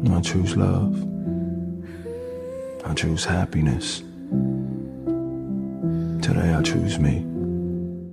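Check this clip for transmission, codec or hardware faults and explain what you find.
No faults detected here.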